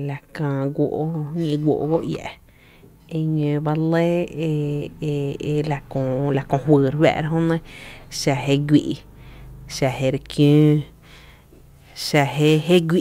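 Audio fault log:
10.42 to 13.01 s, sample clock jitter: from this point to the end of the speech, the converter's timing wanders by a few microseconds, so each sample lands slightly early or late. The resulting error scales with how steeply the waveform is changing, giving a rough hiss roughly 30 dB below the signal that swells on loud, bright sounds and disappears in pauses. That dependence on the signal separates it from a steady background noise floor.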